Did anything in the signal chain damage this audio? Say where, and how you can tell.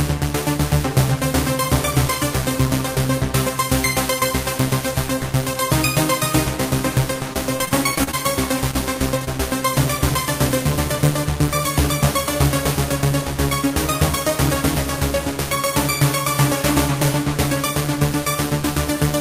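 Yes, the damage is at the network stage. From 7.33 to 8.15 s there is repeated packet loss (robotic sound): eight gaps, the longest 33 ms, with about 120 ms of sound missing and roughly a fifth of that stretch concealed. Each hole is bridged by extending the preceding sound, and the holes come so close together that the result turns choppy instead of continuous.

Two isolated cases of short concealed packet loss follow, at 8.71 to 8.75 s and 9.25 to 9.29 s, each losing 20 ms. The decoder filled each hole by carrying the previous sound forward and then crossfading back into the received audio. What you hear is a brief smear or wobble.

At 9.19 to 9.23 s there is a short stall from a late packet. The arrival delay jumped by 15 ms, the jitter buffer drained, and the receiver held the last sound for about 15 ms until the packet came in. Playback then resumed from the same point, so nothing is missing. 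The only sign is a sound sustained slightly too long, with a faint buzz or dip.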